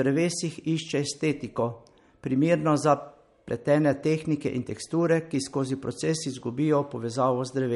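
Throughout the speech, nothing sounds above 11.2 kHz and sibilants turn watery and swirly, likely MP3 compression damage, consistent with a bitrate near 48 kbps.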